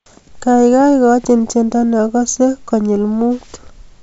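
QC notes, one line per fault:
No faults heard.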